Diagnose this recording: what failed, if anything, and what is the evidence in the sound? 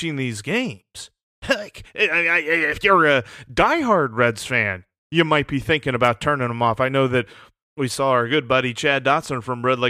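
Nothing in this speech recording points to a failure at any stage of the chain. No event in the sound stands out as evidence of a fault, so there is nothing to diagnose.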